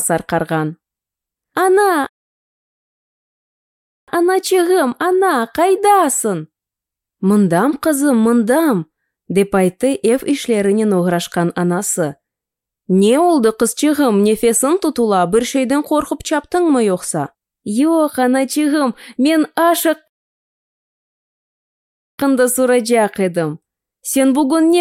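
Rebuffering stalls at 2.07 to 4.08 s and 20.08 to 22.18 s: playback runs out of downloaded audio and halts in silence until more data arrives, adding about 2.0 s and 2.1 s. Each time the sound resumes exactly where it stopped, with nothing missing.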